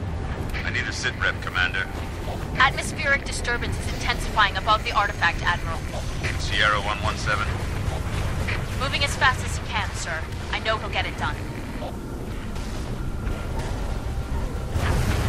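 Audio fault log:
5.74 s, compressed frames skipped: the audio jumps forward by roughly 70 ms, which fits about two 32 ms frames going missing or being rejected by the decoder.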